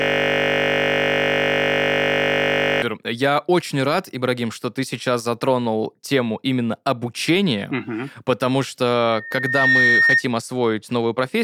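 In this speech clip, the audio is already caught in a steady 50 Hz buzz when it begins, lasting until 2.82 s. That buzz is a system hang loop: the computer or driver stalled while the sound hardware kept replaying the same 20 ms buffer, repeating it well over a hundred times. Later, just after "угу потому", a pure tone near 1.8 kHz swells from 9.06 s, climbing over less than a second to roughly 5 dB above the speech, and stops at 10.24 s. This is a loudspeaker feedback squeal: the microphone was picking up its own loudspeaker, so the loop gain at that frequency exceeded one and the tone kept reinforcing itself.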